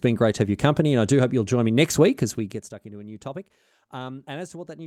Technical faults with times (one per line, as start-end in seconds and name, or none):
none